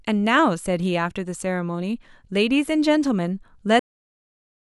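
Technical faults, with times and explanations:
3.79 to 4.79 s, cut-off end: the final stretch of buffers was never written out or played, so the speech halts abruptly at 3.79 s in the middle of a sound and falls straight into digital silence for the last second, with no natural decay or tail.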